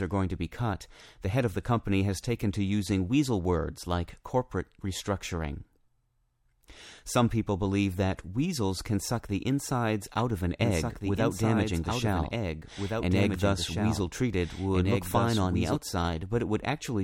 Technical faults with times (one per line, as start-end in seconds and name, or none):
10.62-15.76 doubled audio track